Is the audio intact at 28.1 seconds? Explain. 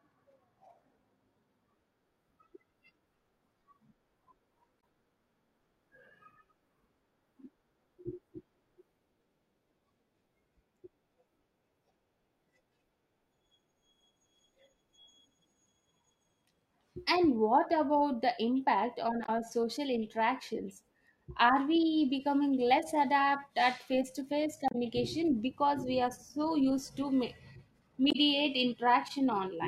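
No, not quite. From about 28.08 to 28.16 s, roughly 80 ms, there's damaged data in the compressed stream. Some of the encoded bytes in that stretch are wrong, so the decoder either misreads those frames or throws them out, loses its place, and hunts for the next valid frame header before it can carry on. What you get is a quick chirp or squawky blip cutting into the speech right at that moment.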